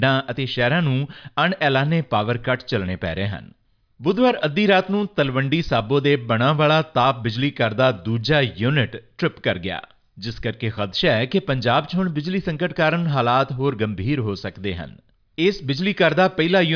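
Listening through the recording, nothing stood out as a technical fault at any point.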